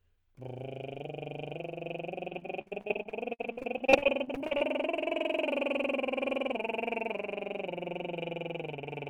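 From 2.29 s to 4.62 s the music breaks up with repeated packet loss, giving a robotic sound. Audio data kept going missing. Each hole was filled by stretching the previous sound, the longest lasting 56 ms. About a quarter of the stretch is patched. It sounds choppy.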